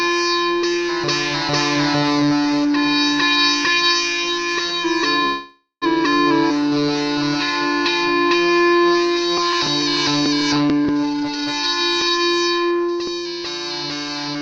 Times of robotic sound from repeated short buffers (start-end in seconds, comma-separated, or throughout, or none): none